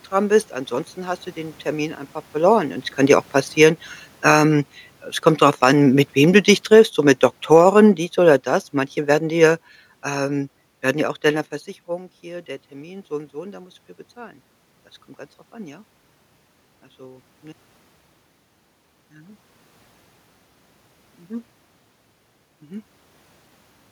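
From 2.35 s to 11.54 s, automatic gain falling lowers the speech by about 12 dB. The room noise sinks along with it.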